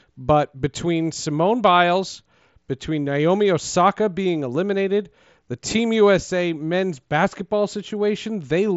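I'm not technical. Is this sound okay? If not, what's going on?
Yes, this speech sounds fine, with nothing wrong to point to, just the usual character of a Bluetooth headset working as it should.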